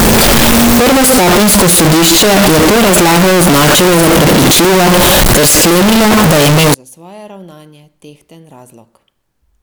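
From 0.0 to 6.74 s the speech is violently loud and harsh, likely signed and unsigned mixed up in 16-bit samples, so every zero crossing jumps full-scale.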